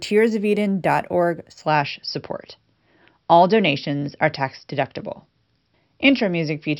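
A speech clip whose first 1.66 s carry a faint metallic shimmer above a dulled top end, most audible on sibilants. This is imaging from linear upsampling: straight-line interpolation, which fits a 12 kHz source raised to 48 kHz, leaves a mirrored spectrum between 6 kHz and 12 kHz, roughly 30 dB down.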